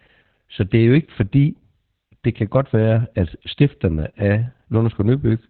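From start to finish the speech carries heavy Opus voice compression. The encoder appears to be running in its SILK linear-prediction mode at narrowband, with nothing above 4.3 kHz, a sound that points to a rate of roughly 8 kbps. The band cut leaves the speech muffled, and the coarsely coded excitation makes it hoarse and faintly robotic. On a spectrogram the energy stops at a flat ceiling near 4.3 kHz, with smeared, blocky harmonics below it.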